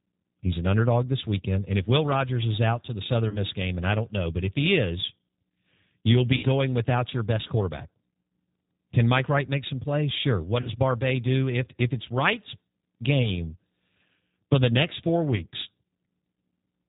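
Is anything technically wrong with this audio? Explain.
Yes. The speech runs through a low-bitrate speech codec for its whole length, and five short dropouts were patched over by that codec's loss concealment.

G.729 codec, throughout: The roughness and band limit fit the 8 kbit/s G.729 codec. It rebuilds each frame from a vocal-tract filter, a pitch predictor and a handful of pulses, so the voice sounds plainly rough and slightly synthetic. On a spectrogram nothing appears above 4 kHz, and the harmonics look smeared and grainy rather than clean.

VoIP packet loss concealed by the speech codec, at 3.29–3.38 s, 6.37–6.45 s, 10.61–10.72 s, 13.22–13.30 s and 15.36–15.43 s: The missing stretches are about 40, 60, 40, 20 and 20 ms, which points to one to three lost packets each. The decoder extends its last pitch and filter with falling gain, so each gap becomes a brief buzzy tone or coloured noise that fades, and the voice stays weak for a moment afterwards. 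A spectrogram shows the frozen sound tapering off. The waveform shows a decaying fill in place of normal variation.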